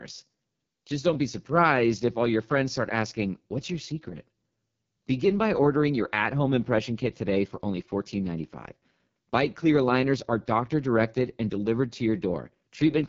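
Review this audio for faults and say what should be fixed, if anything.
The AMR wideband (HD Voice) codec shapes the entire speech clip. Nothing reaches above 7.1 kHz, and the speech sounds rough and raspy throughout. That points to one of the lowest AMR-WB rates, such as 6.6 kbit/s, where too few bits remain for the pulse excitation and the 6.4 to 7 kHz band is filled with shaped noise. To prevent it, capture or transmit at 12.65 kbit/s or higher, or use a wider-band codec.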